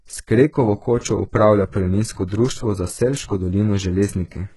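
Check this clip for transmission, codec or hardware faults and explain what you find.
Two codec faults stand out in this speech clip.

HE-AAC compression, throughout: the sound points to heavy damage from likely HE-AAC coding at a very low bitrate near 12 kbps. Replicated treble stops at 11.5 kHz, leaving s sounds gritty and metallic.

Pre-echo, 0.99 to 1.03 s: block-wide quantisation noise fills 43 ms before a sharp attack, so a brief hiss precedes it and the onset sounds smeared.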